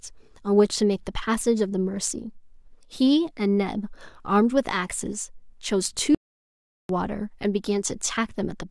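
At 6.15 s the speech cuts out for about 0.75 s until 6.89 s, a playback stall, likely the player starving for data before resuming.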